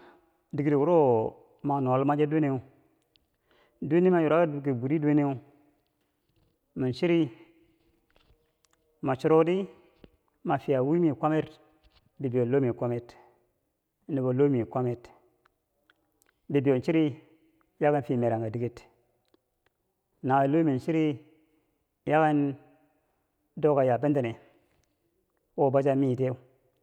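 No technical faults can be heard in this recording.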